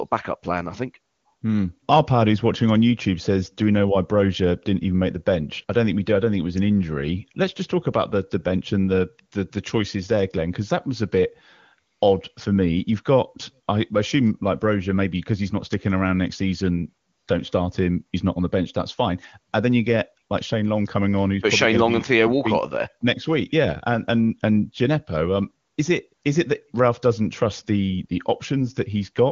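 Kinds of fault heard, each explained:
No technical fault can be heard in this speech, which comes through the AMR wideband (HD Voice) codec path at its top rate of 23.85 kbit/s.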